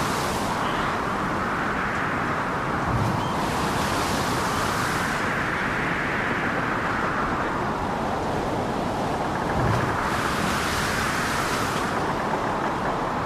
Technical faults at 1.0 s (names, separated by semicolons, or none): lost LE Audio frames